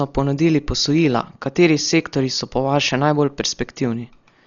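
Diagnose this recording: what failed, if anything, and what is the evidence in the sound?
Codec stage. The speech is dull throughout, with nothing above 6.9 kHz and a rough, fluttering noise around tones. That fits heavy Dolby Digital compression, likely near 40 kbps: the encoder narrowed the band and left many frequency lines without mantissa bits, which the decoder filled with dither noise.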